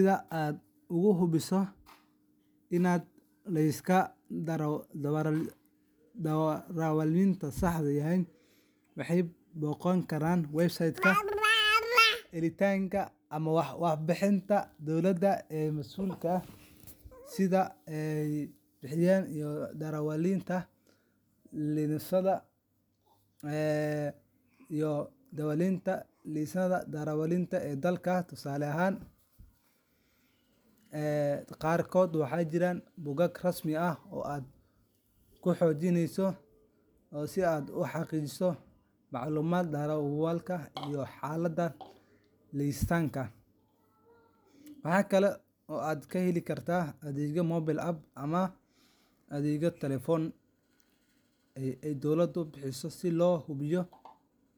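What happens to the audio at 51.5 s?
Nothing goes wrong at 51.5 s; the speech carries on intact through that moment with no dropout, click, distortion or other fault.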